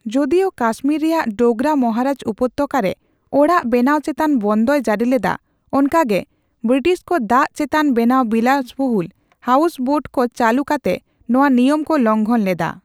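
No technical faults are audible.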